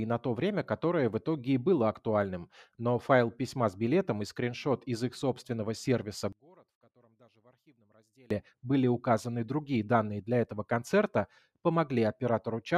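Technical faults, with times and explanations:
6.33–8.31 s, one channel inverted: the centred speech drops by about 32 dB when the stereo is heard summed to mono, leaving only a faint residue until it returns at full level. This is likely one channel flipped in polarity, so the material common to both sides cancels while their small differences survive. Unlike a dropout or mute, the sound does not go fully silent; a faint trace of the speech remains.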